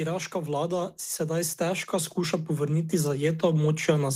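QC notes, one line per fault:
0.32–4.15 s, automatic gain rising: from about a third of a second in, the level of the speech and the background noise climbs together in a slow, steady swell that keeps going to the end of the clip. The automatic gain control has judged the input too quiet and is raising its gain step by step. Because the gain acts on the whole signal, the noise floor lifts along with the voice instead of staying put beneath it.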